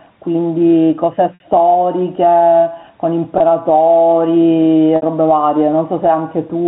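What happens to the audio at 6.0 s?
At 6.0 s the speech is still affected by gain pumping, which runs through the whole clip rather than starting at that moment. The level swings by around 10 dB, so loud and quiet passages sit close together and the sound feels squashed. The likely cause is input gain set too high, with a fast limiter clamping down on every peak. The telephone-band character, with nothing above 4 kHz, is simply the G.711 coding.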